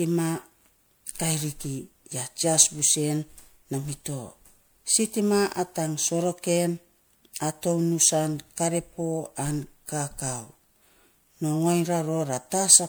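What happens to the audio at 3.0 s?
At 3.0 s, as throughout, the speech sounds swirly, smeared and hollow with blurred attacks: generation loss, likely from MP3 re-encoding about five times, consistent with 128 kbit/s.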